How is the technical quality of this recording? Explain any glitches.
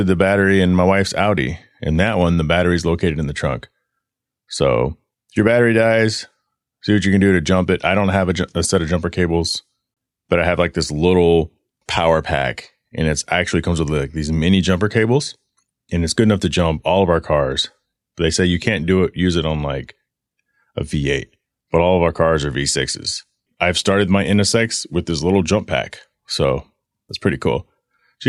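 The recording has one audible glitch, a brief dropout near the ten-second mark, against a light coding character that is likely low-delay AAC compression.

AAC frame loss with muting, from 9.94 to 9.97 s: for about 30 ms the sound drops out, a gap that fits roughly three lost frames. The decoder fills missing frames with silence by zeroing their spectrum, and because AAC frames are built from overlapping windows, the sound fades down into the gap and back up out of it. The result is a short, soft-edged hole in the speech.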